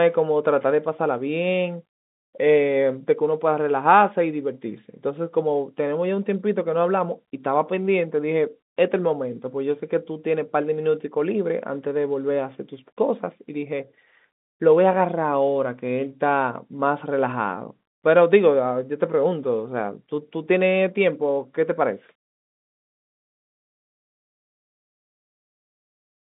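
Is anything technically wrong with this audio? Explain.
No, nothing in this speech recording points to a technical fault. It carries the sound of G.711 telephone coding, with the speech confined to roughly 150 Hz to 3.7 kHz, nothing above about 3.8 kHz, and at most a faint level-following grain, which fits an ordinary 64 kbps mu-law phone line.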